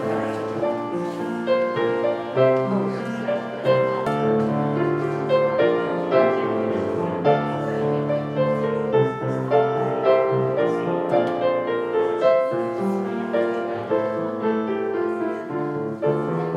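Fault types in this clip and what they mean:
Damaged data in a compressed stream: at 4.07 s the sound is broken by a brief chirp, squawk, click or short hole that does not belong to the surrounding audio. Part of the compressed stream at that point was corrupted, with bytes lost, zeroed, overwritten or mixed with unrelated data, so the decoder could not read those frames correctly, lost its place, and had to hunt for the next valid frame header before playback resumed.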